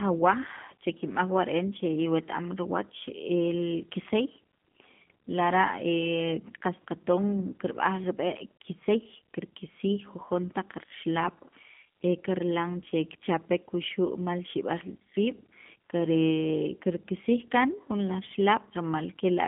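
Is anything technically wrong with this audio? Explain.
Yes. Throughout, the speech sounds thin, slightly rough and synthetic, confined to roughly 150 Hz to 3.4 kHz. This is G.729 codec damage, plainly audible here. The codec rebuilds each 10 ms frame from a vocal tract filter, a pitch predictor and a few pulses, at a rate that fits 8 kbit/s.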